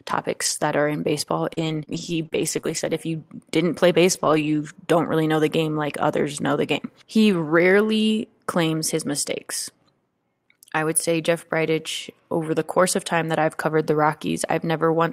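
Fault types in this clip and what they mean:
Scattered short gaps: brief ticks and smears between 0.45 and 4.61 s, about four tiny dropouts (longest around 30 ms) patched by extending the preceding sound.
Lost packet rebuilt from error correction: a momentary rougher, noisier patch at 7.33 s, where one 20 ms packet was replaced by a low-bitrate backup copy.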